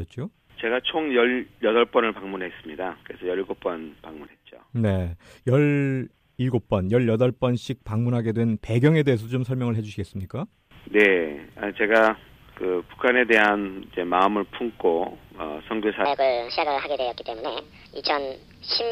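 From 16.05 s to the end at 18.92 s, the audio plays at the wrong speed. That section runs 1.51 times too fast. Pitch rises with tempo, by roughly seven semitones, so it sounds high and hurried. The likely cause is playback against the wrong clock.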